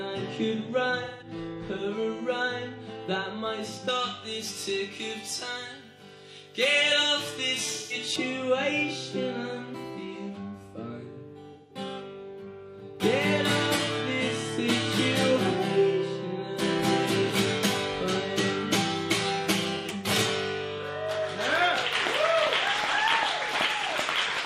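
Four short smeared, phasey patches at 1.03–1.27 s, 7.71–7.93 s, 11.53–11.77 s and 19.76–19.86 s are AAC frame loss with concealment; unlike dropouts, they fill with noisy spectrum rather than silence. From 3.88 to 8.16 s, pre-emphasis left on makes the audio thin and sibilant, about 11 dB too bright at 10 kHz. This steady tilt is unlike a resonant peak.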